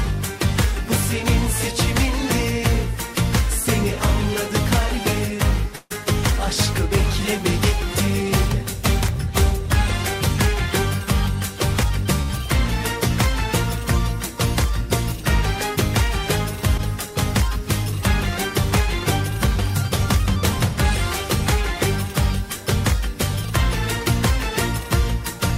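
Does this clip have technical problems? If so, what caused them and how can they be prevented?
Yes. At 5.75 to 5.92 s there is a call audio freeze: the last sound is carried on for about 150 ms as a fading buzz rather than dropping to silence, and the audio then resumes from where it stopped, so nothing is lost but everything after it plays about 150 ms later. The likely cause is packets delayed in transit until the jitter buffer ran dry. On a spectrogram this shows as horizontally smeared, repeating bands that dim across the gap; the waveform shows a decaying, periodic stretch with no true flat silence. A larger adaptive jitter buffer, or a more stable network path such as wired instead of Wi-Fi with traffic prioritised for the call, would prevent it.

Two short stalls from a late packet follow, at 12.22 to 12.32 s and at 16.77 to 16.81 s. In each, one packet missed its playout time, so the receiver stretched the preceding sound, by about 72 ms at 12.2 s and about 15 ms at 16.8 s, then continued from the same point. 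The result is a briefly held sound with a slight buzz or dip, and the first stall also adds about 72 ms of delay. On a spectrogram each appears as a small patch of frozen, horizontally extended harmonics, and in the waveform as a short run of near-identical repeated cycles. Giving the jitter buffer slightly more headroom and reducing network jitter would prevent these.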